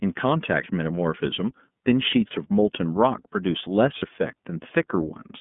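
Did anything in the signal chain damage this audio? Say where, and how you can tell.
Yes. At the codec stage, the iLBC codec confines the speech to roughly 150 Hz to 3.5 kHz with a rough, synthetic texture, which fits its 13.33 kbps, 30 ms-frame mode. A spectrogram shows nothing above 3.5 kHz.

At the network stage, lost iLBC frames at 2.27–2.31 s and 3.99–4.07 s sound like a held, buzzy vowel, each fitting one lost 30 ms frame. The waveform shows a repeated pitch cycle, and the spectrogram shows frozen harmonics.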